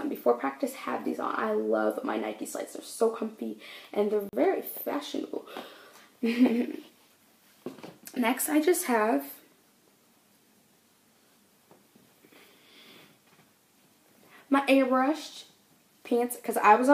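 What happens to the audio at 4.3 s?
A block of digital silence runs from 4.29 to 4.33 s, a 40 ms stretch where the sound drops to silence. The signal is cut off mid-waveform and then resumes just as abruptly, with no fade on either side. At 40 ms the gap is long enough to register as a brief hole in the audio, not a single tick.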